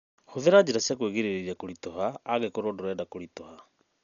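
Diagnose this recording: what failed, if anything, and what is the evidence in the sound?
The failure sits at the codec stage: throughout the speech the band stops dead above 6.9 kHz, and a rough, fluttering noise clings to voiced tones, which is likely Dolby Digital compression at heavy damage, fitting a bitrate near 48 kbps. Unlike a plain low-pass filter, starved frequency lines get refilled with dither noise.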